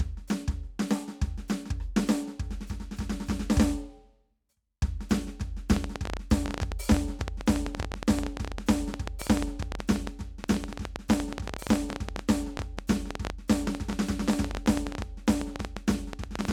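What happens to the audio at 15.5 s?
At 15.5 s the music is inside a train of clicks running from 5.76 s to the end at 16.52 s. About 11.3 similar clicks per second arrive at an irregular pace, peaking well above the music. Likely interference or a faulty connection or power supply injects them.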